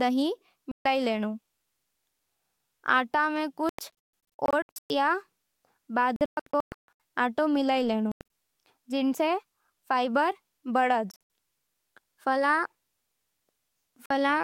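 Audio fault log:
0.71–0.86 s, 3.69–4.90 s, 6.16–7.00 s, 8.12–8.21 s, 11.11–11.21 s, 14.06–14.11 s, Bluetooth dropout: the speech cuts to abrupt silence, in stuttering bursts at 3.69 s and 6.16 s (about 0.67 s and 0.58 s lost), then resumes further along, likely from wireless packets arriving too late and being discarded.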